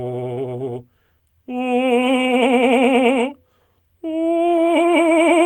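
No faults to report; the music runs without any audible defect at any point.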